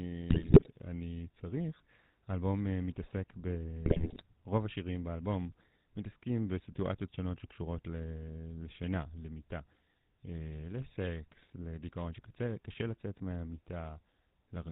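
The speech has passed through the GSM full-rate codec, which keeps a model of the vocal tract and drives it with a thinned-out train of regular pulses. The damage is plainly audible for the whole clip: nothing above 4 kHz survives, and the voice carries a buzzy, gravelly roughness from that coarse excitation. This character fits the 13 kbps full-rate coder.

From 0.30 to 0.69 s, GSM bit errors strike. Corrupted bits reach the decoder, so the filter, pitch and gain values it rebuilds are wrong for a run of frames, and the sound breaks into squawks, pops and a gargling smear. A second burst from 3.86 to 4.23 s does the same. Both bursts point to a link flipping roughly 4 to 5 percent of its bits.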